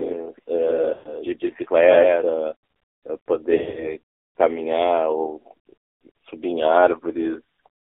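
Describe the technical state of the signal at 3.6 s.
At 3.6 s the sound falls inside a burst of lost AMR speech frames, running from 3.56 to 3.94 s. About 140 ms of audio is missing, scattered over roughly 200 ms, with the longest gap 60 ms. The decoder fills each gap by repeating its last good pitch and tract settings at falling gain. So the sound smears, warbles and dips before recovering roughly.

Under this sits the AMR narrowband mobile codec, present throughout. The band is limited to about 300 Hz to 3.6 kHz, and nothing above 4 kHz survives. The low-rate pulse-driven model makes the speech plainly buzzy and synthetic, which fits a bitrate around 7.4 kbps.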